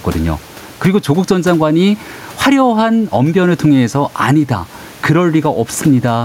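Throughout, the input gain is likely set far too high, with a fast limiter pulling it down on loud syllables. This gain pumping swings the gain by around 10 dB, and the room noise sits about 34 dB below the speech.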